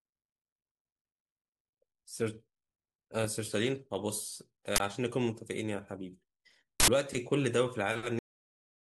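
At 4.76 s the speech is interrupted by a sudden, loud burst of harsh digital noise lasting 40 ms, and a second, longer burst of 80 ms follows at 6.80 s. These are uninitialised buffers: each block went to the output before any audio had been written into it, so whatever values were left over in memory were played as if they were samples, producing loud raw noise.

At 8.19 s the audio drops straight to digital silence in the middle of the sound, with no decay or tail, and stays silent to the end. This is a cut-off end: the final buffers were never filled or played out, so the recording is truncated abruptly rather than being allowed to finish.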